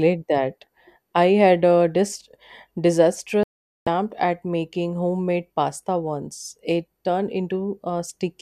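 At 3.43 s the speech drops out for a digital broadcast dropout: bad frames, so the receiver mutes about 0.44 s of audio, returning at "at making homemade pasta".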